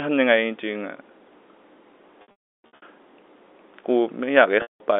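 Packet loss with pitch repetition at 2.22–2.82 s and 4.62–4.80 s: missing packets are bridged by a repeated, fading pitch period, so the sound buzzes briefly, then drops out before cross-fading back.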